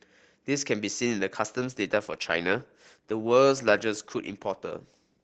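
At about 1.58 s the speech suddenly drops in quality, and it stays that way right to the end. That's an adaptive stream at a lower bitrate: the connection slowed, so the player switched to a leaner encode mid-stream, with no gap at the join. Codec artefacts creep in. The change sounds like Opus stepping down from around 64 kbit/s to roughly 16 kbit/s.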